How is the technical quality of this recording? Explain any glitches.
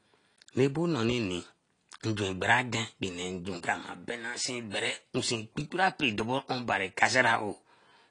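The recording has two faults: codec damage throughout the speech and one pre-echo.

Throughout, heavy AAC compression is the likely cause: a low bitrate, around 32 kbps, cuts everything above 10.1 kHz, leaving the speech dull, smeared and fizzy.

From 4.70 to 4.74 s, pre-echo: the codec spreads quantisation noise across its block, so a short hiss precedes the attack by about 38 ms, softening it.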